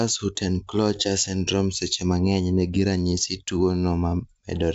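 No technical faults can be heard in this speech clip. It carries the wideband band-limit of G.722 telephone coding, with at most faint coding texture, which fits its full 64 kbit/s mode.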